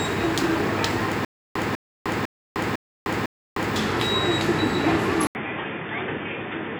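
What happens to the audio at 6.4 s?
At 6.4 s the sound is in its dull, boxy stretch, which runs from 5.27 s to the end. Nothing above 3.6 kHz gets through, the level is about 10 dB lower, and a new noise floor sits roughly 30 dB below the signal, all after an 80 ms silence at the changeover. The likely cause is an input switched to a poorer device. A codec's bandwidth drop would narrow the band but wouldn't bring the gap, the new hiss and the level step together.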